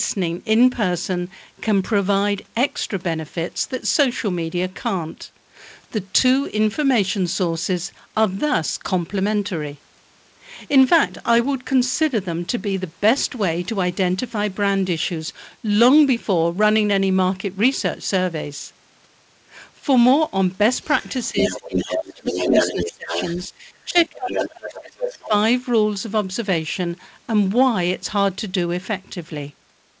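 A speech recording in which a second voice leaks through from 20.93 to 23.45 s and again from 23.98 to 25.28 s. It sits only about 5 dB below the main talker. This is the other side's voice leaking through. The likely cause is the far end playing on a loudspeaker, with the echo canceller failing to remove it from the microphone.

The talker's own speech drops while that second voice plays. The dips run from 21.31 to 23.14 s, 23.5 to 24.79 s, and briefly 25.18 to 25.33 s. The deepest cuts are roughly 20 dB, 25 dB and 15 dB. This is speech suppressed in double talk. With both sides talking at once, the echo canceller likely could not tell its talker from the echo and turned everything down. Nothing is heard above 8 kHz, which fits a G.722 call path.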